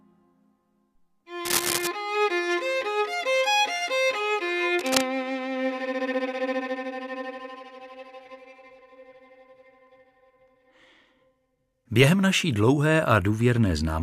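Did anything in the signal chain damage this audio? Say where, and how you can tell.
Yes. Cable scratch noise at 1.45 to 1.88 s and again at 4.78 to 5.01 s, in the analogue wiring stage. Both events are short clusters of dense, irregular crackle laid over the sound, the first roughly as loud as the signal itself and the second a little quieter. That ragged, rustling texture most likely comes from a worn cable, connector or control being moved, its contact resistance fluctuating rapidly and injecting noise bursts.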